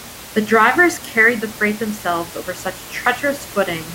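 Nothing in the system trips up here, and the only thing underneath the speech is the room's own background noise, sitting about 17 dB below it as part of the recording.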